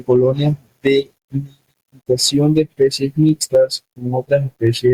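Gain pumping runs throughout: background noise swells between loud sounds and ducks by around 5 dB under each, likely from a fast limiter; the waveform looks squashed, with breathing noise-floor bands.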